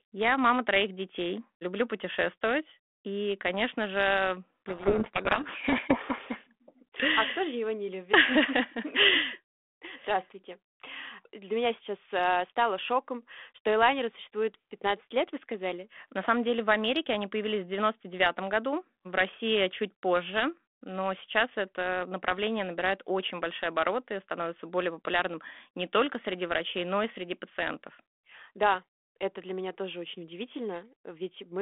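Speech over a G.726 ADPCM telephone link, band-limited to about 250 Hz to 3.5 kHz with light grain that fits 32 kbit/s. From 4.66 to 6.37 s, a codec payload misread buries the speech in harsh distortion: the G.726 code words are being read in the wrong bit order. A spectrogram shows dense broadband smear filling the band there, and the waveform turns jagged and noise-like until it abruptly recovers.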